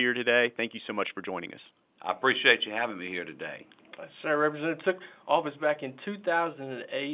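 Speech heard through G.711 mu-law telephone coding, with the band closing off at 4 kHz in a way that fits an 8 kHz sample rate and the faint level-following quantisation noise that format always carries, shows no technical faults.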